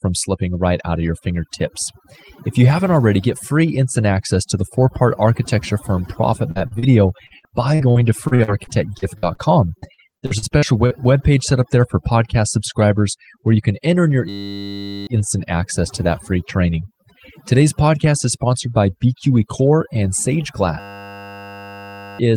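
Overdone noise removal runs throughout: a suppressor set too strongly cuts frequency bands near its noise estimate, leaving a near-silent, twinkling background. At 6.51–6.58, 6.67–6.74 and 6.79–6.85 s, short concealed packet loss occurs: about 40 ms of audio fails to arrive each time and is bridged by extending the preceding sound, heard as brief smears or wobbles. From 7.26 to 9.41 s, and again from 9.78 to 10.93 s just before "page set up there", repeated packet loss keeps punching gaps of up to 48 ms, each patched in turn, so the speech turns choppy and robotic with pieces missing. At 14.29–15.07 s, between "can enter in your" and "instant access to that", a system hang loop freezes the computer while the hardware recycles one 10 ms buffer, producing a steady 100 Hz buzz in place of the speech. The same hang loop returns at 20.8–22.19 s, buzzing at 100 Hz over roughly one and a half seconds of lost audio.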